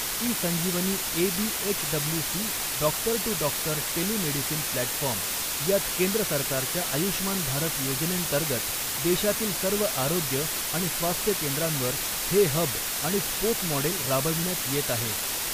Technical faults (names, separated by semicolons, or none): low bit depth with dither